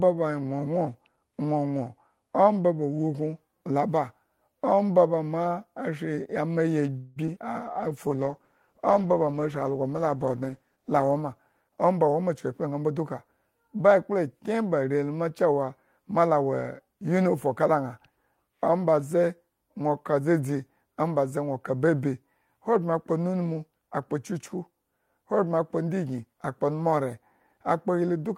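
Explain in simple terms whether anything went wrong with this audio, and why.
Call audio freeze at 6.97 to 7.18 s, just after "ma shri ama yi": the sound stalls and trails off for about 0.19 s, then resumes. The likely cause is packets held up in transit, which left the receiver briefly without audio to play. Nothing is lost, but a pause is inserted.

Short concealed packet loss at 7.26 to 7.29 s and 7.35 to 7.38 s: tiny pieces of audio, about 20 and 40 ms long, never arrived. The receiver patched each gap, leaving a quick smear or wobble.

Jitter buffer slow-down at 7.64 to 8.17 s: the receiver repeated tiny slivers of sound to rebuild its reserve. Playback runs about 7% slow at the same pitch, stretching sounds slightly.

Call bitrate drop from 7.67 to 12.12 s: the connection seemed to shrink, so the sound was sent with far less detail. It turns rougher and duller, at its worst for about 3.5 s.

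Jitter buffer speed-up at 11.64 to 12.89 s, leading into "duka ba ekpla kyen": too much audio had piled up, so the receiver trimmed tiny pieces, about a fifth of a second in total. The sound runs about 15% fast and feels hurried.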